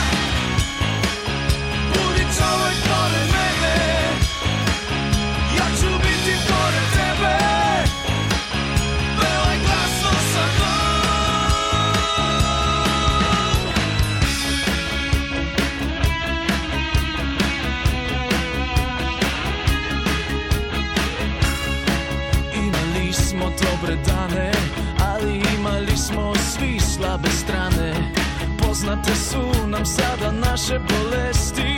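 At 20.05 s and again at 22.72 s, compressed frames are skipped: roughly 70 ms of sound vanishes, likely about three 23.2 ms frames, so the audio jumps ahead.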